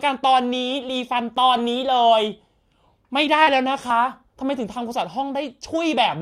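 A dropped buffer (overrun) is heard in this speech clip at 1.37 s and again at 3.90 s. Each is a sudden jump in the sound with no gap of silence, as though roughly 20 ms of audio has been skipped and the two sides spliced together. The likely cause is the recording program falling behind, so the hardware overwrote samples before they were collected. Short concealed packet loss appears between 3.43 and 3.49 s. About 40 ms of audio failed to reach the decoder in time, and the receiver covered about 35 ms of it by extending the preceding sound before blending back into the real signal. This is heard as a brief smear or wobble, with the original detail of that moment lost.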